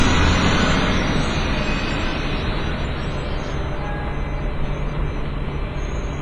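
From start to end, the audio carries heavy WMA compression damage. Nothing reaches above 10.6 kHz. Quiet detail drops out, and noise smeared across long blocks gives a ringing, washy hiss that breathes with the sound. This likely comes from a low bitrate, fitting 24 kbps.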